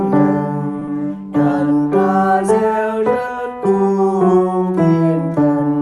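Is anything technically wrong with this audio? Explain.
Yes, two things, back to back near the start.

At about 0.79 s there's a short stall from a late packet, lasting to 0.83 s. A packet showed up late, the jitter buffer ran dry, and the receiver held the last bit of sound for about 20 ms until it arrived. Then it picked up where it left off, so nothing's lost. You just hear a slightly stretched moment, maybe with a faint buzz.

Right after, from 0.85 to 0.89 s, there's a short concealed packet loss. About 20 ms never made it to the decoder, so the receiver papered over the gap by extending the preceding sound and blending back in. That comes across as a brief smear or wobble, and a little audio is genuinely gone.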